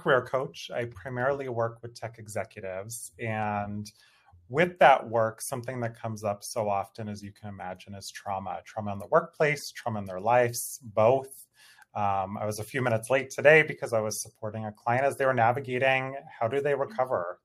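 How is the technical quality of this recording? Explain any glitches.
Nothing here is glitching; the audio runs along without a single dropout, click, stutter or other hiccup anywhere in it.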